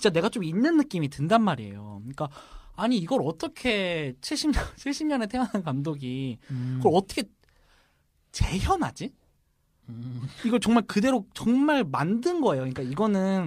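No technical faults can be heard anywhere in the recording.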